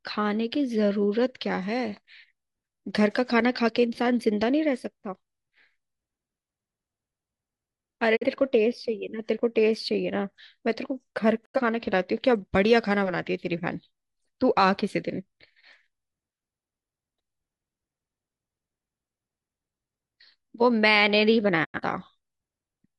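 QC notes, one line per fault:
8.15–8.26 s, 11.44–11.60 s and 21.63–21.80 s: digital broadcast dropout. Speech fades out over 20 ms into brief silence, then resumes. The receiver muted on failed frames; the first hole fits one lost frame of about 43 ms, the later two fit two, and that audio is gone.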